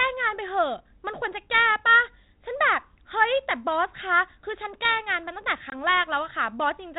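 At 5.70 s there's a short packet loss on an ADPCM call, roughly one packet lost, a 20 ms hard-edged silent gap. When the audio comes back at 5.73 s the decoder's predictor has drifted from the sender's, so the speech returns slightly distorted before it settles.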